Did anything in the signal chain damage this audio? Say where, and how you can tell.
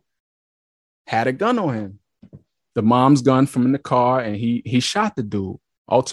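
No, nothing in this speech recording stood out as a problem on listening.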